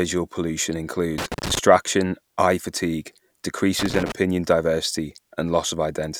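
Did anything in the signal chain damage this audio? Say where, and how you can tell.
Yes: loose connector crackle in the analogue wiring, from 1.18 to 1.59 s and again from 3.79 to 4.12 s. Irregular bursts of scratchy crackle break through the speech as a worn or dirty contact repeatedly opens and closes, chopping the signal.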